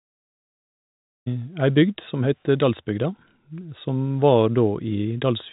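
The speech carries no technical faults, with its G.711 telephone coding behaving as that format does and leaving nothing audible above about 3.8 kHz.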